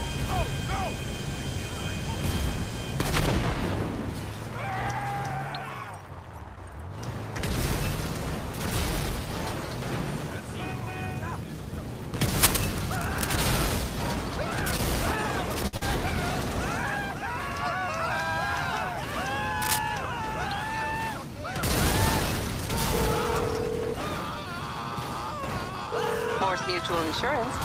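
From 12.42 to 13.26 s a dense, uneven scratching and rustling sits over the sound, only a few decibels below it. This is cable scratch noise, likely from a worn cable, connector or control being moved so its contact resistance fluctuated rapidly.

At 15.67 s a short stall from a late packet begins. The receiver's buffer ran dry, so the last sound was held for 60 ms until the delayed data arrived and playback resumed where it stopped. Nothing is lost, but the sound hangs briefly with a faint buzz or dip.

Right after, from 15.77 to 15.83 s, comes a short concealed packet loss. 60 ms of audio never arrived in time. The decoder synthesised 41 ms from the preceding sound and blended back in, and the delay also shrank by roughly 20 ms. It is heard as a quick smear or wobble.

A second, shorter burst of the same cable scratch noise occurs from 19.61 to 19.79 s, again at a similar level close to the signal.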